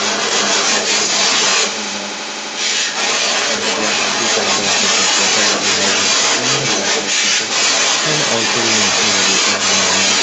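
Most likely an echo canceller failing to remove the far end's loudspeaker playback, so the other side's voice leaks through the whole clip, roughly 10 dB louder than the main speech.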